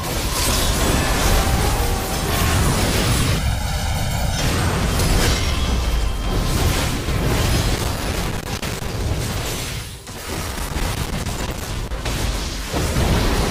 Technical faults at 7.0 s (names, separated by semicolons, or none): none